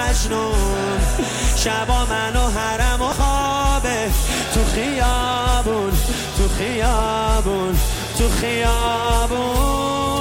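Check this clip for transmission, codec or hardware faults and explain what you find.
One fault is present: damaged data in a compressed stream, at 3.12 s. It is a very brief blip lasting only a few milliseconds. A short stretch of the encoded bitstream arrived corrupted, so the decoder could not interpret those bytes as valid audio frames. It lost frame sync while it searched for the next good frame header. The result is a brief disturbance before normal decoding resumes.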